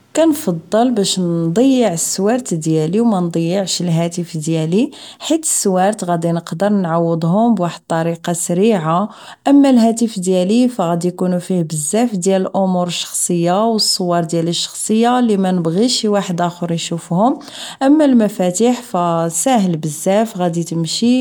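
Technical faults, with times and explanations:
Nothing here needs flagging, since this speech recording has no technical faults to point to at any moment.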